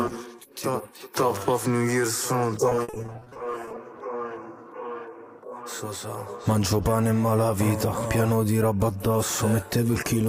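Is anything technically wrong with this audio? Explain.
Yes. Between 2.69 and 3.77 s there is repeated packet loss (robotic sound). The stream kept losing or receiving data too late, and the playback side filled each short hole, none longer than 50 ms, by stretching out the last sound it had. About 450 ms of that roughly one-second stretch, or 42%, is patched-in material. The result is choppy audio with pieces of the sound missing.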